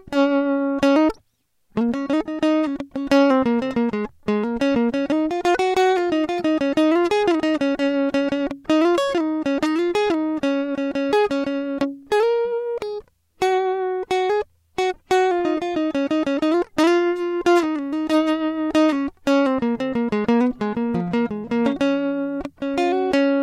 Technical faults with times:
none

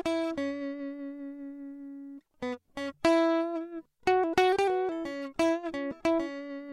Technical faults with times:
none

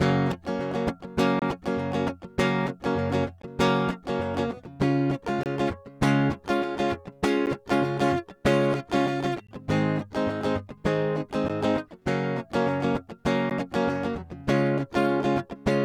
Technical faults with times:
1.39-1.42 gap between stream segments
3.42 gap between stream segments
5.43-5.46 gap between stream segments
7.46 gap between stream segments
9.47 gap between stream segments
11.48 gap between stream segments
13.50 gap between stream segments

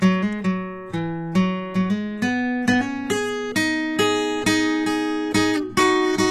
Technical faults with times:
0.00-6.31 HE-AAC compression

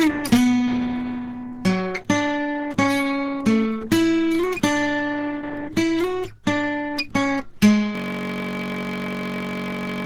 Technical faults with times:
0.00-10.06 Opus compression
7.95-10.06 system hang loop

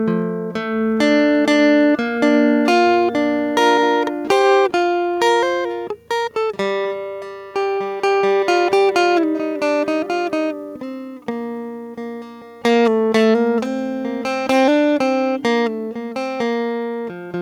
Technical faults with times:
0.00-17.41 gain pumping
0.11-17.41 clock slip clicks

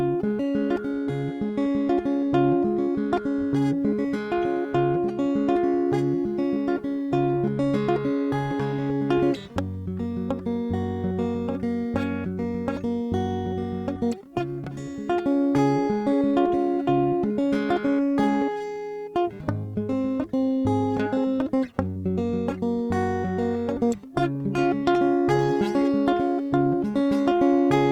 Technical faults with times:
15.37-18.63 repeated stalls (stutter)
18.68-18.98 jitter buffer slow-down
21.07-22.10 jitter buffer speed-up

